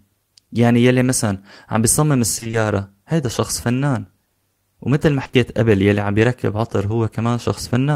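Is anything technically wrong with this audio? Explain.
Yes, two packet-loss problems can be heard in this speech clip.

Repeated packet loss (robotic sound) runs from 2.35 to 2.55 s. Audio kept getting lost or arriving too late in gaps of up to 20 ms, each patched by extending the preceding sound, so about half of that stretch is filler. The result is a choppy, robotic-sounding passage with pieces missing.

Short concealed packet loss occurs three times in quick succession, starting at 5.23, 5.27 and 5.31 s, with about 20 ms lost each time. The receiver continued the last sound through each hole before blending back into the real audio, giving a brief smear or wobble.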